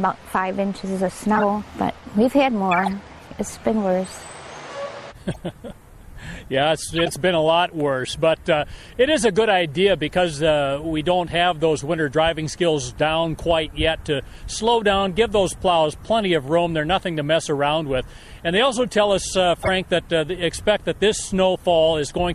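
Throughout, the sound is watery and swirly, with dulled treble and smeared attacks, likely from MP3 compression at a low bitrate that fits 64 kbps. Brief chirps and noise bursts at 1.35–1.44 s, 2.72–2.90 s, 5.31–5.38 s, 6.96–7.14 s and 19.62–19.69 s are corrupt frames decoded. The decoder played damaged frames anyway and put energy at the wrong frequencies. The bursts at 1.35 s and 19.62 s are loudest, peaking at about −5 dBFS, while the one at 5.31 s is faint.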